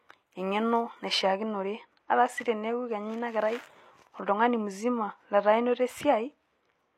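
From 1.22 s to the end, the speech turns dull and muffled. This is de-emphasis applied wrongly. A treble cut meant to reverse pre-emphasis hit audio that never had it, or was applied twice. The response slopes down smoothly, about 8 dB lower at 10 kHz than at 1 kHz.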